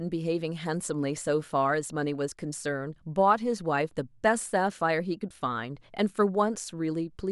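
No dropouts, distortion, clipping, glitches or level jumps turn up anywhere in this speech recording.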